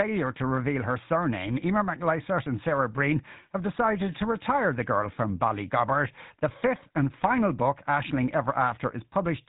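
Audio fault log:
Throughout: GSM full-rate codec. The speech has been squeezed through an early mobile-phone coder that models the vocal tract as a filter and drives it with a coarse, regularly spaced pulse train, keeping only a thinned-out version of the excitation. The result is a plainly audible buzzy, gravelly roughness over every voiced stretch, with nothing above 4 kHz, which fits a rate of around 13 kbps.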